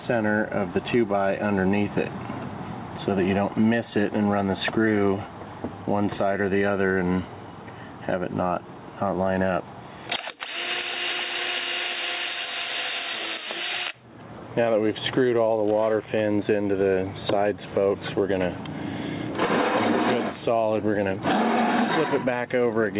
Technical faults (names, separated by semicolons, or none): gain pumping